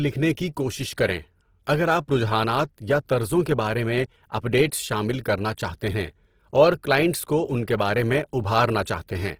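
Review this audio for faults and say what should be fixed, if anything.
Throughout, the speech sounds grainy and rough despite reaching 20.4 kHz. This is likely Opus compression in CELT mode filling bit-starved bands with noise, which fits a bitrate around 16 kbps. To prevent it, encode from the original source at a higher Opus bitrate so each band keeps its real detail.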